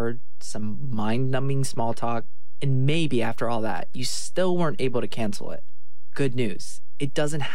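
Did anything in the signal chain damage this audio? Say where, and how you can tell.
Yes. Nothing audible gives it away, but the whole waveform sits off zero from start to finish: a constant DC offset of about -19 dBFS, seen as steady energy at 0 Hz that eats headroom. This points to the analogue input or converter stage.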